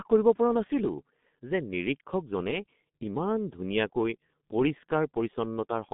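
G.723.1 codec damage runs throughout: nothing above 3.8 kHz survives, and coarse 30 ms frames leave speech muffled and hoarse, consistent with about 6.3 kbit/s.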